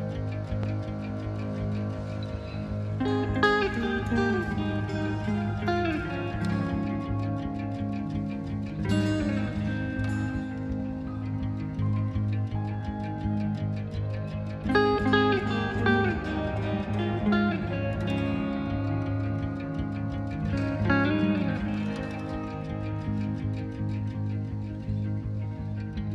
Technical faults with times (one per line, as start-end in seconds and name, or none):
0.63-0.67 loud pop